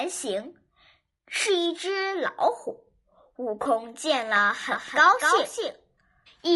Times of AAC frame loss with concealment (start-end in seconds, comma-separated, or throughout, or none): 3.63-3.67